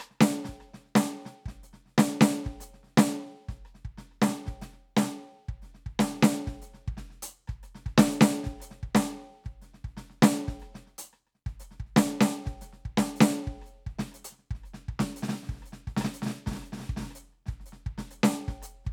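A music clip with no technical faults to report.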